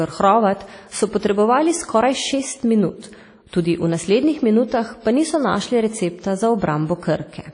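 Right from the start the speech has that ringing, washy quality with hiss pumping along underneath, and nothing comes through above about 10.1 kHz. That's most likely WMA compression at a low bitrate, something like 32 kbps, where long transform blocks smear the noise around.

At 3.47 s there's a pre-echo. A sharp attack sits late in its block, so the codec's noise spills about 56 ms ahead of it, up to 3.53 s. You hear a quick hiss before the onset, and the attack itself comes out softened.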